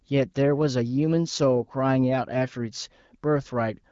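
No technical faults are audible.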